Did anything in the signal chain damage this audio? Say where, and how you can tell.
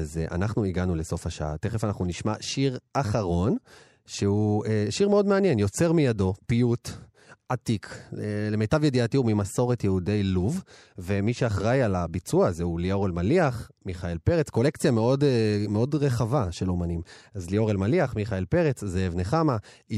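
No, nothing in this speech recording stood out as damage from any stage of the signal chain when listening through it.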